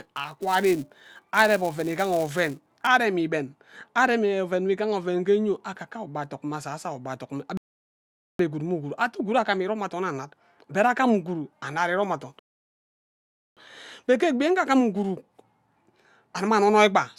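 From the start to 2.87 s, a filter in the chain is restarted on every block: it discards its internal state at each block boundary and begins again from silence, so each block opens with a small transient. At this rate, which fits a 128-sample block, those transients fuse into a buzz at 375 Hz laid over the speech. The buzz rises and falls with the level of the signal, and it stops once the filter keeps its state.

At 7.57 s, just after "ayo ugbe adok mme", the player runs out of downloaded audio and a rebuffering stall follows. The speech cuts to silence for 0.82 s and then carries on exactly where it stopped, with "gwud mme". A second stall comes at 12.39 s, after "annad irom athon", and lasts 1.18 s. No speech is lost in either gap, but each one stretches the clip by the length of the wait.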